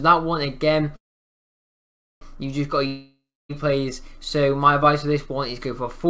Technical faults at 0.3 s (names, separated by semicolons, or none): none